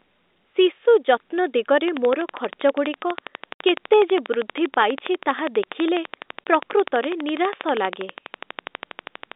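From 1.88 s to the end at 9.33 s, a train of clicks runs over the telephone-band audio, which is limited to roughly 250 Hz to 3.7 kHz. About a hundred near-identical pulses arrive at a steady 12.2 per second, peaking well above the speech level. They tick straight through pauses as well as speech. That regular, uninterrupted ticking that takes nothing away from the sound most likely comes from interference from nearby equipment or a struggling interface.

Two stretches of packet loss filled with silence cut into the speech. The first, from 3.54 to 3.60 s, is a 60 ms hole, which fits three lost 20 ms packets. The second, from 6.44 to 6.46 s, is a single 20 ms gap. Unlike the click train, these add nothing. The sound simply drops out to dead silence, with abrupt edges to each hole.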